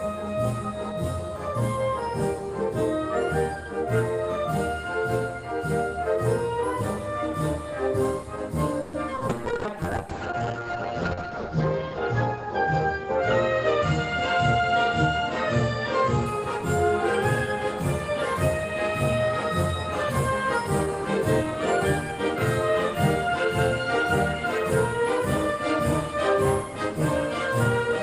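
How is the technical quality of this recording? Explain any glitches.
The recording has several network-related faults clustered between 8.8 and 16.3 seconds.

From 8.81 to 8.95 s comes a call audio freeze: the last sound stretches into a fading buzz for about 120 ms, likely because delayed packets emptied the jitter buffer. Nothing is lost. The audio resumes where it stopped, about 120 ms later.

At 9.15 to 9.19 s and again at 9.19 to 9.23 s, short concealed packet loss fills two 20 ms holes with extrapolated sound. These are brief smears or wobbles, and unlike the freeze, real audio is actually missing.

From 9.29 to 16.32 s, a call bitrate drop takes the encoder from 32 to 8 kbps, narrowing the bandwidth from 20 kHz to 8 kHz. The sound turns muffled and rough, bottoming out for about 2 s. Unlike the brief glitches, this degradation is prolonged and affects tone rather than timing.

From 14.21 to 15.08 s, a jitter buffer speed-up plays the audio at 105% by trimming about 50 ms of pitch periods. 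The sound becomes slightly hurried while its pitch stays unchanged.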